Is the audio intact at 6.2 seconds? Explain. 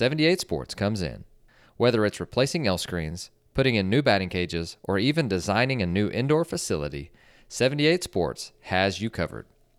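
Yes, the speech at 6.2 seconds plays through without any dropout, click, distortion or other fault.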